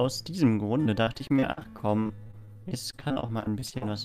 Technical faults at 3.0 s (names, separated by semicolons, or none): repeated packet loss (robotic sound)